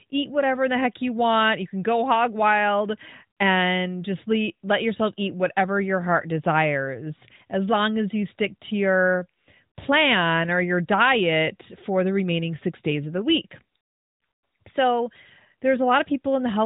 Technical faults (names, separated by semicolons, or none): none